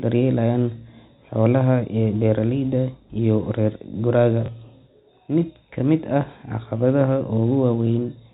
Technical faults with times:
4.46-4.48 packet loss with last packet repeated

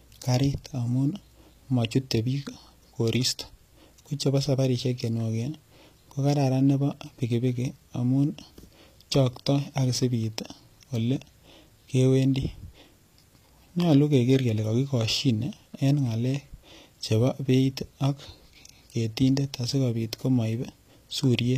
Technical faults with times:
0.00-21.57 HE-AAC compression

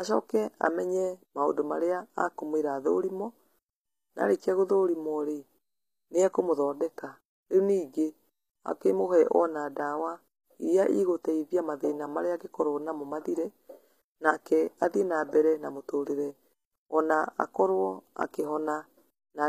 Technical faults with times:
0.00-19.49 HE-AAC compression

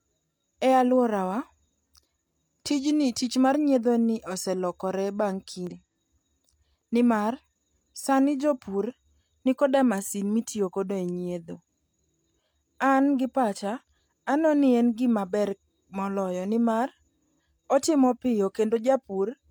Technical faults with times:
5.67-5.72 damaged data in a compressed stream

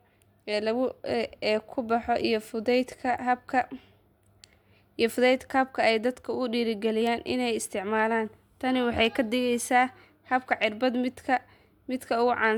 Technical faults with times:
none

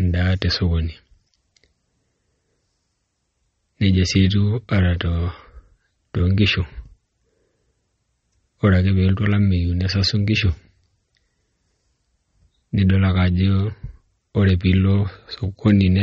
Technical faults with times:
0.00-16.02 MP3 compression

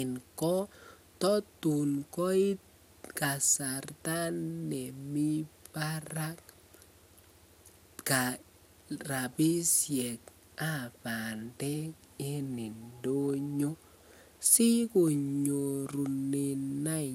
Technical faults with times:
0.00-17.15 generation loss

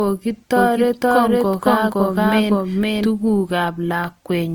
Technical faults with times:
0.00-4.54 low-bitrate audio saved at a high bitrate
0.56-3.10 doubled audio track

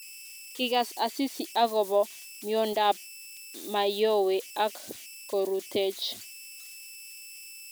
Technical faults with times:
0.00-7.71 converter idle tones

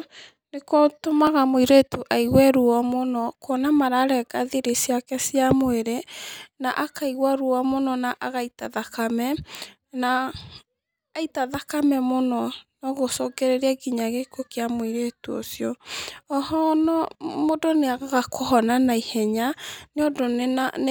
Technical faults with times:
1.27 dropped samples
8.65 dropped samples
10.40 dropped samples
11.54 dropped samples

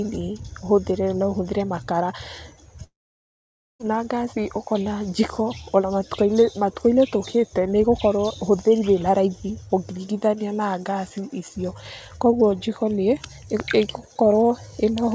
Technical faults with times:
2.84-3.81 long network dropout

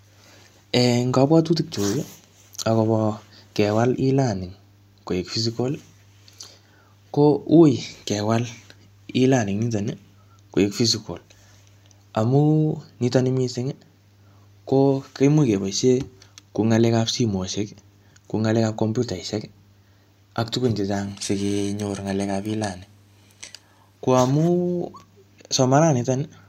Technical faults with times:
21.04-23.97 periodic clock jitter

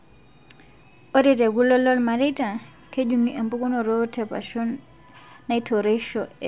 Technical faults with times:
none

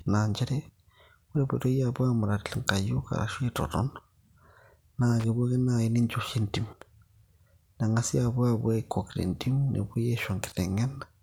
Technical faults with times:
5.20-5.24 loose connector crackle

